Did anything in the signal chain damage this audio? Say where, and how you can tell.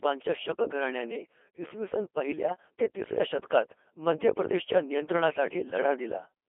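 Yes. At the codec stage, the whole clip went through a Codec 2 vocoder, which keeps only pitch, voicing, energy and a spectral envelope and then rebuilds speech from sine waves. The heavily robotic, buzzy tone, confined to roughly 300 Hz to 3.4 kHz, fits its 2.4 kbit/s mode.

On the radio link, bit errors on digital voice radio struck from 5.68 to 5.78 s. At an error rate of around one bit in ten, corrupted parameters made the synthetic voice jump in pitch and level and turn into a brief warbling blip. That span fits two damaged vocoder frames.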